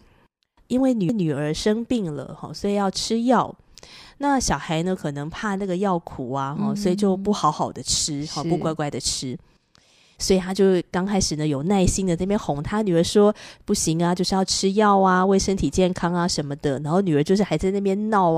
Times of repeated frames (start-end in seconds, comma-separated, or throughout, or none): 1.09-1.28